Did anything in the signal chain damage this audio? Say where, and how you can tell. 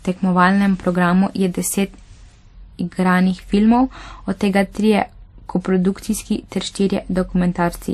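Yes, at the codec stage, throughout the speech. Nothing comes through above 13.8 kHz, and two kinds of coding damage sit on top of each other: the artefacts of two different codecs are heard together. This is likely transcoding between lossy codecs, a low-rate MP3 encode later re-encoded to WMA at a modest rate. The second encoder spent bits reproducing the first one's artefacts and added its own. A single low-bitrate encode would show one consistent artefact character, not two overlapping.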